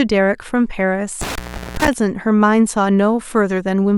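Around 1.21 s the speech hits an intermittent contact, and it runs until about 1.93 s. A connector somewhere in the chain loses its grip for a moment, so the signal path physically breaks and then reconnects. You get a crackle as the contact scrapes open. Then the audio drops out for roughly 0.38 s, with just a faint hiss in the gap, and another crackle when the connection snaps back.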